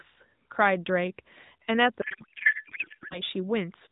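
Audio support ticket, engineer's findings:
Codec payload misread, 2.02–3.22 s: speech turns to garbled warble; octet-aligned AMR frames decoded as bandwidth-efficient, so bit fields land in the wrong places.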